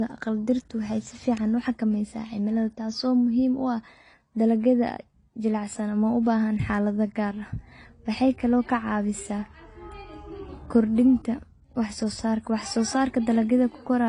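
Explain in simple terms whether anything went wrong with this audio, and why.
Something did go wrong, and it runs through the whole speech clip: it sounds like transcoding between lossy codecs. The audio was likely squeezed by one compressor and then squeezed again by a second, different one. The second pass wastes effort copying the first one's flaws and then adds its own, so you get two kinds of swishy, smeared grit layered together. Nothing above about 10.6 kHz survives either, which takes the crispness off the top end.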